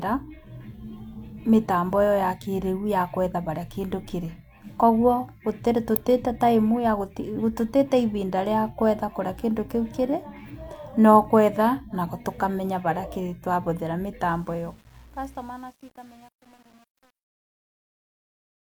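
From 14.30 s, just after "kĩrĩ twahũthĩra", the fade-out to 18.69 s shows truncation distortion on a fade: undithered gain keeps too few bits, consistent with 10-bit depth. From 14.69 s it sounds gritty; the waveform turns to square steps, the spectrogram to broadband speckle.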